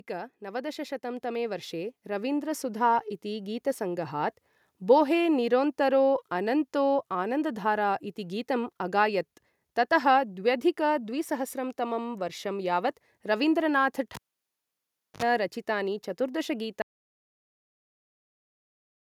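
A speech recording with three faults. At the start, automatic gain rising: the gain control judged the input too quiet and pushed its gain up by about 12 dB between 0.07 and 4.23 s, so the voice and the background swell together over those first four seconds. From 14.15 to 15.23 s, the cable was pulled and plugged in while live. Right after "वर्षं यावत् रवीन्द्रनाथ" a pop cuts the sound to near silence for about 1.03 s, a 61 ms burst of 50 Hz mains buzz sounds as the plug tip makes partial contact, and a second pop brings the sound back just before "रचितानि चतुर्दश". At 16.82 s, immediately after "रचितानि चतुर्दश", the input was likely lost and the recorder kept writing silence, an audio dropout to silence. The sound stops mid-flow and the rest of the clip is dead silence with no room tone.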